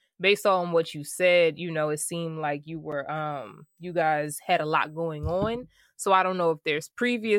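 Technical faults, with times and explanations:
3.31–5.37 s, USB whine: Just after "seemed like you were", a faint, steady high-pitched whine sits under the speech, well below it at roughly 45 dB down. It is a fixed tone at 8 kHz with its strongest component at 16 kHz. That pitch matches the 125-microsecond microframes of a USB bus. The current the bus draws in each microframe leaks into the audio path through shared power or ground, so the interface's own timing becomes audible.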